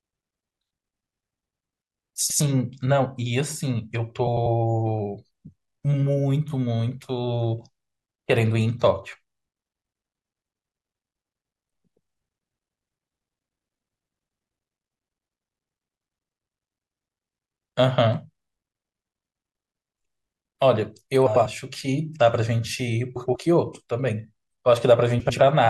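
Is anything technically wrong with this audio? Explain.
Yes. Frames out of order at 2.20–2.41, 4.27–4.46, 21.26–21.46, 23.15–23.36 and 25.20–25.40 s: two adjacent 96 ms blocks play swapped, giving a garbled flutter, but no lost time.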